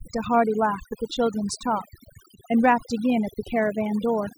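A speech recording with two problems running the whole way through. First there's a DECT cordless phone buzz: a thin, steady 100 Hz drone with a comb of harmonics stacked above it, sitting roughly 30 dB under the speech. That rate is the giveaway. A DECT handset or base nearby fires a radio burst every 10 ms, and something in the audio chain rectifies those bursts into audible buzz, so it never lets up between phrases. On top of that there's overdone noise removal. The background in the gaps between phrases has been pushed down, with little twinkling specks popping in and out. What's happening is the denoiser is clamping individual frequency bands whenever they look like its noise estimate, and it's been set hard enough that the quieter parts of the speech are getting pulled down along with the noise.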